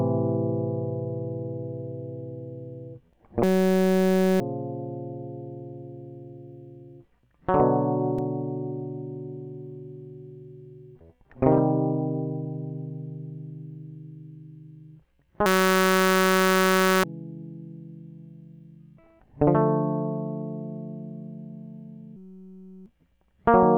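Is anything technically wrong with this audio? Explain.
Yes. The music has a system hang loop three times: 3.44 to 4.40 s, 15.46 to 17.04 s, and 22.17 to 22.86 s. Each time, the system stalled while the playback hardware kept replaying its ring buffer. A 5.33 ms slice repeats over and over, which fits a 256-sample buffer. It sounds like a steady buzz at 188 Hz. The music resumes afterward, roughly one second, one and a half seconds, and under a second further on.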